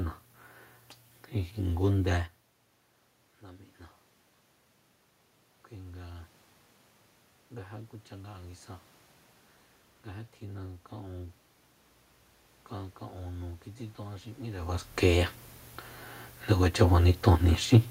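From 13.21 to 15.36 s the level climbs by about 4 dB as automatic gain rising takes hold: the gain control judged the input too quiet and pushed its gain up steadily over those two seconds. What marks it as gain rather than a talker moving, like the shifts near 2 and 14.5 s, is that the room noise swells along with the speech, so the background lifts in step instead of staying put.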